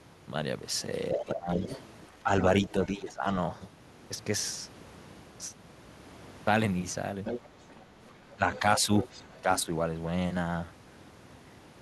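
From 1.13 to 1.67 s, 2.23 to 3.25 s and 8.34 to 9.69 s, the talker's speech is suppressed in double talk, likely because an echo canceller turned down both voices while they overlapped. Level drops by roughly 10 to 15 dB for about 0.4 s within each span. The waveform envelope sags, and the spectrogram's upper harmonics fade.

The other side's voice leaks through at 1.13 to 1.8 s, 2.64 to 2.69 s, 7.25 to 7.85 s and 8.53 to 9.61 s. This is likely loudspeaker echo the canceller failed to remove. It sits around 10 to 20 dB under the talker, appearing as faint formant traces beneath the main speech.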